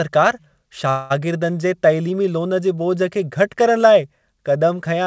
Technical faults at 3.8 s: none

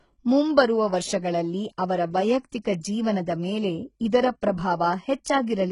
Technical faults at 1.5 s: HE-AAC compression

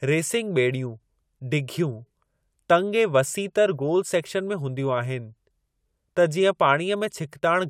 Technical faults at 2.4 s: none

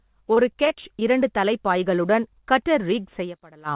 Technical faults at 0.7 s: repeated packet loss (robotic sound)

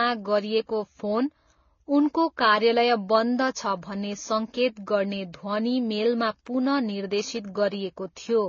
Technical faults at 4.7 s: transcoding between lossy codecs

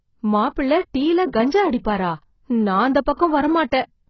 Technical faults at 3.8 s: AAC compression

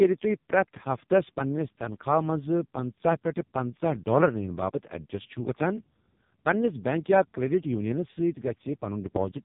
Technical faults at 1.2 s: AMR narrowband mobile codec

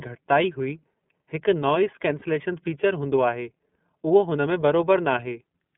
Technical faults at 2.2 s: iLBC codec; lost iLBC frames

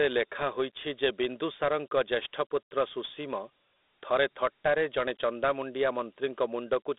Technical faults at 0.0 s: Dialogic VOX ADPCM

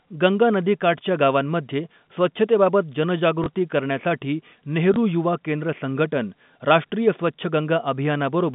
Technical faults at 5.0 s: packet loss with last packet repeated

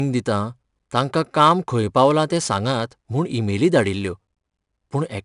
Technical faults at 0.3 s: 4-bit ADPCM compression

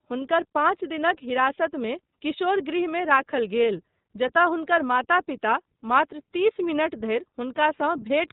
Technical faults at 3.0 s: iLBC codec

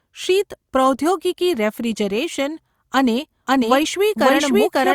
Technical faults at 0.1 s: none

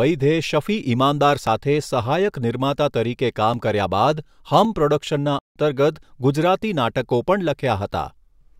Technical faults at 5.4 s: playback stall

